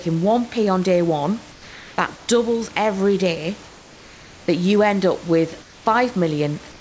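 Comfort noise replaces the room background in four pauses in the speech: 1.52 to 1.98 s, 3.68 to 4.48 s, 5.62 to 5.86 s, and 6.72 to 6.80 s. The real background is swapped for a flat, featureless hiss. That hiss is about 3 to 4 dB quieter than the room noise around it. The likely cause is discontinuous transmission. The sender stops during silence, and the receiver fills the gap with synthetic noise.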